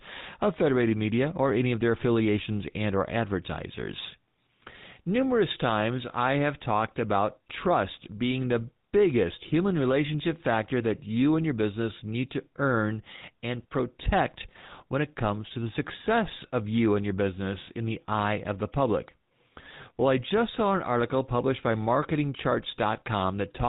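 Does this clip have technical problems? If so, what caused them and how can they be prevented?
Yes. The speech carries GSM full-rate codec damage from start to finish: a buzzy, gravelly roughness from the coarse pulse-train excitation, with nothing above 4 kHz. A spectrogram shows a hard ceiling at 4 kHz and smeared harmonics, consistent with a 13 kbps GSM link. Prevent it by recording or routing through a wideband path rather than a legacy GSM voice channel.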